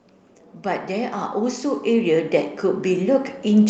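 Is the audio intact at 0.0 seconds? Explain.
Yes, the speech is intact at 0.0 seconds, with no fault there beyond the normal band limit around 8 kHz from the call path it passed through.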